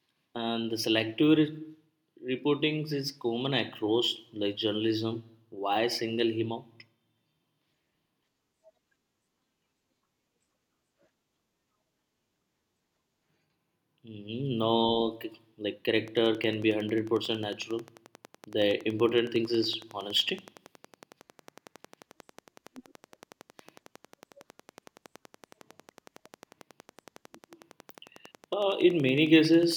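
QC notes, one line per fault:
16.08–29.73 s, train of clicks: a steady ticking starts partway through and runs to the end, about 150 near-identical pulses at a regular 10.9 per second. They peak about 5 dB above the speech, so they sit on top of the talking and carry on through the pauses. The even spacing and uniform shape point to a repeating external pulse, likely interference from nearby equipment or a faulty connection or power supply, rather than anything in the recorded sound itself.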